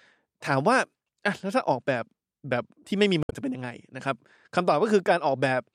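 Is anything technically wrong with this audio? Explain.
Yes, there is one fault. From 3.20 to 3.33 s the speech breaks up briefly because of damaged data in a compressed stream. Corrupted bytes make the decoder misread frames and search for the next valid header. A spectrogram shows a brief disruption cutting through the speech pattern, and the waveform shows an abrupt discontinuity.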